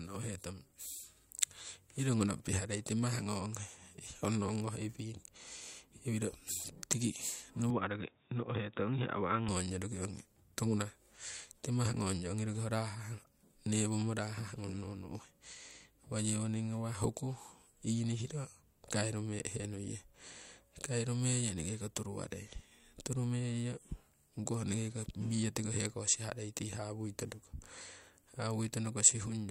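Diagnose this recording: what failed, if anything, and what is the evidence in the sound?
After "iwiro tiki", 7.70 to 9.48 s loses everything above 3.8 kHz and gains faint new background noise. This is likely an input switched to a poorer device, a capture-stage fault rather than codec narrowing.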